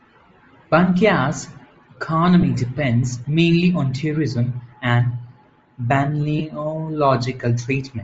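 All through the speech there's a breathy, grainy top end, likely Bluetooth LC3 compression filling the upper band with noise, which fits roughly 32 kbps with 7.5 ms frames. At 2.42 s, 4.71 s and 6.39 to 6.41 s, lost LE Audio frames make brief noisy smears where the decoder patched each gap with the previous spectrum.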